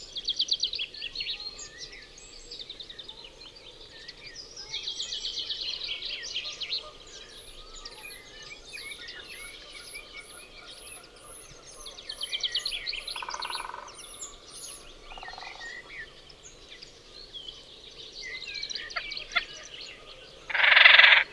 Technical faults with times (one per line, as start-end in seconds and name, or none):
none